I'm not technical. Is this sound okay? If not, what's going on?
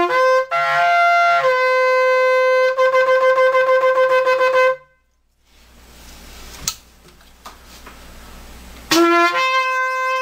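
Yes, the sound is fine, with no technical problems to be heard at any point.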